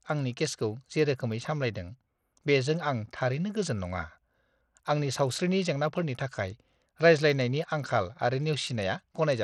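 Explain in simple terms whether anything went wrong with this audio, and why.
Throughout the speech, the treble flickers in and out and a gritty, grainy noise clings to the sound. That pattern points to Bluetooth SBC compression as the likely cause. A simple muffling filter would dull the top smoothly, but this codec starves the upper bands unevenly, leaving rough grit.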